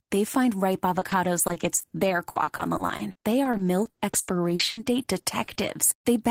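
From 0.85 to 5.65 s, just after "find ripe", repeated packet loss makes the speech choppy and robotic, with 27 gaps patched by stretching the last sound.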